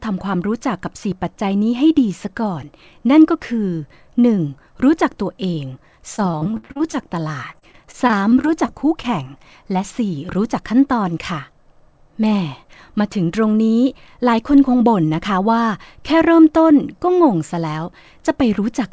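Packets in this speech went missing repeatedly from 6.16 to 6.95 s, with about ten holes, the longest around 55 ms. Each hole was papered over by extending the preceding sound, so about a third of the stretch is concealment and comes out choppy and robotic. The same repeated packet loss returns from 7.51 to 9.05 s, with shorter holes of at most 22 ms, concealing about 12% of the stretch. Throughout, the call path's G.722 coding leaves nothing above 8 kHz.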